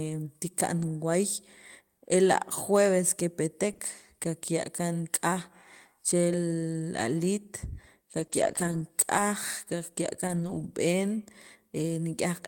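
At 0.77 to 0.87 s the speech turns briefly rough and grainy without any gap. This is a lost packet rebuilt from error correction. Roughly three 20 ms packets went missing, and the decoder played the low-bitrate backup copies carried in the packets that followed. On a spectrogram those frames look coarser, with harmonics blurred into a noisier texture. The same rougher patch recurs at 3.69 to 3.71 s.

At 3.73 to 3.81 s come two back-to-back instances of short concealed packet loss, each about 20 ms. With no backup copy available, the receiver extended the preceding sound and then crossfaded back, which is heard as a quick smear or wobble. The spectrogram shows the preceding sound stretched across the hole, and the waveform shows a smooth stretch instead of the natural detail.

Rebuilt frames return at 8.19 to 8.25 s, followed by another 20 ms concealed gap at 8.27 to 8.31 s. A long grainy stretch from error correction then runs from 8.31 to 8.81 s and covers about 260 ms of audio. 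The degradation is audible as a sustained rough, fuzzy quality, and the spectrogram shows smeared fine structure throughout. Shorter rebuilt patches follow at 9.17 to 9.19 s and at 10.27 to 10.65 s, the latter covering about 200 ms.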